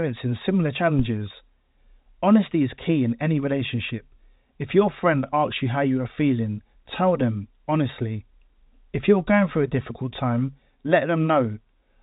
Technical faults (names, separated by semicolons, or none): phantom power thump